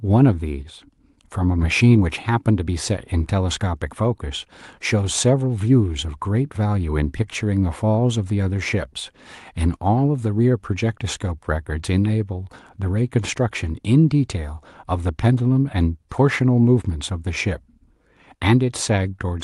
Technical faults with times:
none

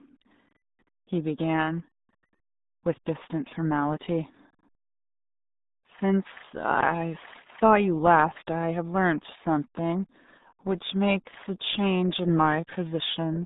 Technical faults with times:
0.00-13.45 RealAudio 14.4 codec

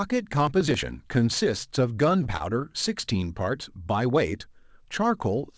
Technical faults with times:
0.47-0.83 processor overload crackle
2.24-2.42 short stall from a late packet

